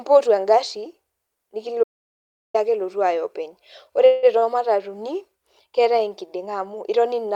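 At 1.84 s the speech cuts off abruptly and the track drops to digital silence until 2.54 s. This is an audio dropout to silence: the input was most likely lost, through a disconnected device, a broken link or an unintended mute, while the recorder kept writing silence. The gap carries no room tone at all, and about 0.71 s of speech is simply gone. When the audio resumes, it comes in mid-flow.

From 4.05 to 4.25 s there is a call audio freeze. Packets were most likely delayed in transit, leaving the jitter buffer empty, so the receiver extended the last sound for 174 ms. That fill is heard as a buzzy, fading continuation that never reaches silence. When the packets arrive, the speech picks up exactly where it paused. Nothing is missing, but the audio is pushed back by 174 ms.

Shortly afterwards, between 4.39 and 4.44 s, a short stall from a late packet occurs. One packet was not ready when it was due, so the receiver held the current sound for 30 ms before carrying on from the same point. 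Nothing is lost. The result is a briefly overstretched sound with a faint buzz, and it adds a further 30 ms of delay.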